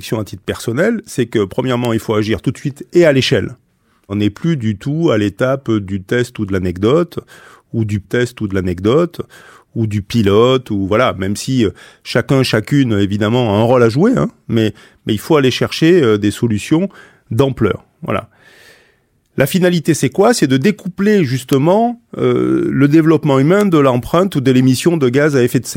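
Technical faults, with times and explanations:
1.85, 15.88, 21.53, 23.61 and 25.33 s: bit error spikes, one or two flipped samples jumping by a power of two, each a single broadband tick unrelated to the speech, unlike a rhythmic buffer click.
8.04 to 10.06 s: stream segment repeated. Right after "de l'anecdote ou du", the player queued the same segment twice, so about 2.0 s of speech plays again after a small blip, rather than stuttering in short loops.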